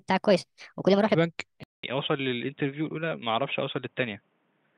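From the start to 1.15 s, the opening section was likely fitted to the wrong clock, so it plays at 1.31 times the recorded speed. Pitch and tempo rise together, by roughly five semitones, making the speech sound high and hurried before it snaps back to normal.

At 1.64 s the system likely switched its input to a poorer device, with a gap of about 200 ms at the change. From there to the end, the device passes a narrower band, so the speech turns dull and boxy. The level drops by around 5 dB, and a new background noise sits roughly 45 dB below the speech.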